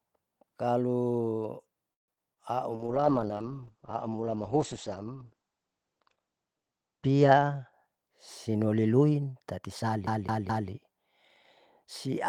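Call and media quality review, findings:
Call audio freeze, 1.93 to 2.10 s: playback halts for about 0.15 s, almost all of it silence, then resumes where it stopped with nothing lost. Likely jitter buffer underrun from late packets. The gap adds about 146 ms of delay.

Short concealed packet loss at 2.14 s and 2.34 s: brief smear or wobble, about 20 ms each. Decoder concealment extends the preceding sound across each hole, then crossfades back into the received audio. Any short consonant there may be gone.

Call bitrate drop, 2.75 to 9.42 s: the encoder rate falls from 32 to 9 kbps after the bandwidth estimate collapses. Audio turns rough and muffled, and audio bandwidth narrows from 20 kHz to 8 kHz. It stays at the lowest rate for about 3.2 s.

Jitter buffer speed-up, 7.36 to 8.49 s: audio plays about 8% fast at unchanged pitch and sounds hurried. The receiver trims pitch-period segments to drain an overfull buffer, removing about a tenth of a second in total. 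This overlaps the low-bitrate stretch.

CD stuck on one turn, 10.07 to 10.70 s: rapid even stutter. The same 0.21 s segment plays three times, with a short mute at each jump. A scratched disc sends the laser back one track per revolution.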